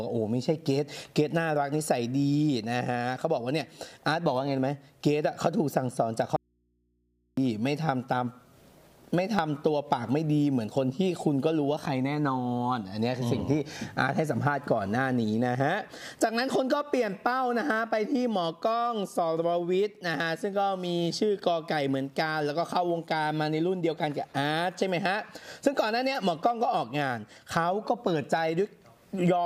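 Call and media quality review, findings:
Audio dropout to a faint residue, 6.36–7.37 s: source likely lost upstream while the input stayed open. About 1 s of sound becomes mains hum roughly 45 dB down, with abrupt edges.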